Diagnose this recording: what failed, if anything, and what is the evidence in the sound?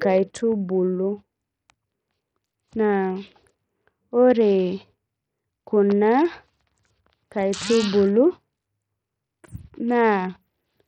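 Codec stage: throughout the speech the treble is thin and flickers in and out, with gritty noise and aliasing riding on the sound. This fits heavy Bluetooth SBC compression, likely a starved bit pool near 64 kbps, leaving upper sub-bands almost bitless and the rest coarsely quantised.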